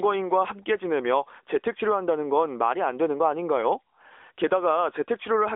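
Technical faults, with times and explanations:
No technical faults detected.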